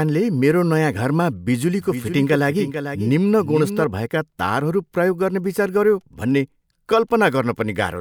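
From 1.80 to 3.84 s the speech carries a doubled audio track: a second, full-band copy trails by roughly 0.4 s, about 10 dB quieter, likely from a duplicate capture path. Unlike an echo, it has no decay or room colour, and it switches on and off abruptly.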